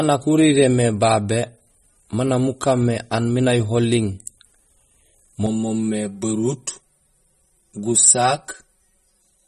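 Throughout, the speech carries plainly audible codec damage with a watery quality and nothing above 12.4 kHz, likely MP3 compression at a low bitrate around 32 kbps. From 5.46 s to the end, channel delay (comb filtering) sets in: one channel lags by roughly 5 ms, so summing to mono cuts evenly spaced notches from around 100 Hz, giving a hollow, phasey sound.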